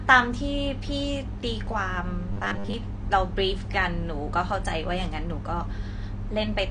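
Right from the start the whole recording sounds dull and a bit smeared, with nothing above about 9.7 kHz and a fizzy, warbly edge on sibilants. That's likely AAC compression at a low rate, something like 32 kbps AAC-LC, trimming the top end and starving the quantiser.

From 2.33 to 2.74 s the speech turns into a rigid metallic buzz pinned at 100 Hz, still loosely tracking the syllables. That's likely robotic sound from repeated short buffers: a 10 ms chunk replayed over and over, covering most of that stretch, while the real audio gets skipped.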